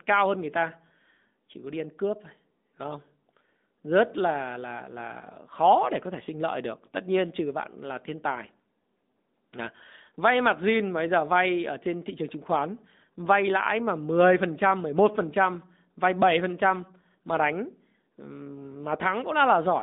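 From start to finish the speech carries AMR narrowband mobile codec damage, plainly audible. The line passes only about 200 Hz to 3.7 kHz, nothing above. Sparse pulse-driven vocal-tract modelling leaves a buzzy, synthetic edge, which fits a mid-rate mode near 10.2 kbps.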